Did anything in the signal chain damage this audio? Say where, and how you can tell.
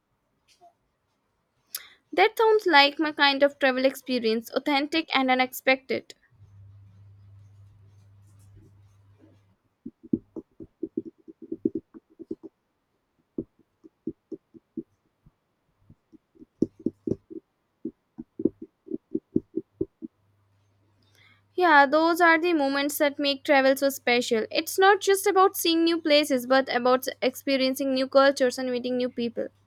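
No, nothing in the signal chain has left an audible mark on this speech recording, and the level, continuity and frequency content hold steady with no stage showing signs of damage.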